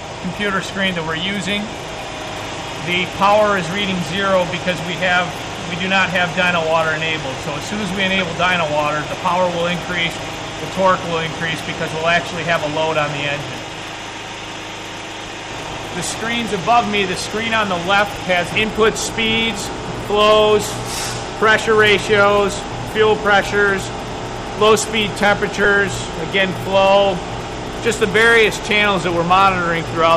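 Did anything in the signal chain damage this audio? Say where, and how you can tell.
Yes, at the codec: corrupt frames decoded at 0.60, 8.18, 10.33 and 25.63–25.66 s. Flipped bits misplaced spectral energy, giving short chirps, squeaks, blips or noise bursts, two far louder than the others.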